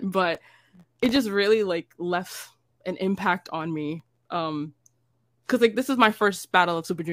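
From 0.35 to 1.16 s, and again from 4.00 to 4.32 s, the speech carries processor overload crackle. Dozens of sub-millisecond buffers miss their deadline and drop to silence, so the sound tears into gritty crackle. Unlike a single dropout, it's a dense burst that stops once the load clears.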